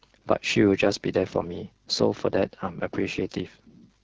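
Throughout, the speech carries AMR wideband (HD Voice) codec damage: a rough, raspy buzz, consistent with a low rate near 8.85 kbit/s. Unlike narrowband telephone coding, content reaches toward 7 kHz, the top band being synthetic noise rather than true detail.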